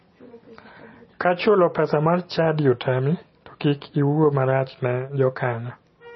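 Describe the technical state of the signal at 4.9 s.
At 4.9 s the speech carries likely MP3 compression running the whole clip, starved of bits as at roughly 24 kbps, cutting everything above 5.9 kHz and leaving a dull, watery, swirling sound.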